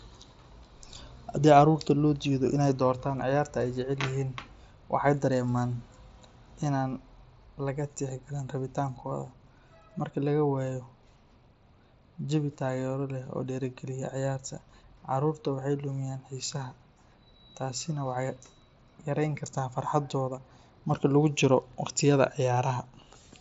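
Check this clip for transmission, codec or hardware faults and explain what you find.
No faults turn up here; the speech just sounds like ordinary Bluetooth mSBC headset audio, with the top end stopping around 7.7 kHz as you'd expect from that wideband link.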